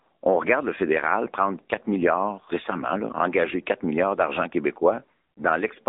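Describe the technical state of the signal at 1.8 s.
At 1.8 s the speech sounds thin and boxed in, with plainly audible synthetic coloration and nothing above 3.7 kHz. This is AMR narrowband mobile codec damage, present throughout. At 7.95 kbps the voice is rebuilt from a pitch predictor and sparse pulses within roughly 250 Hz to 3.7 kHz.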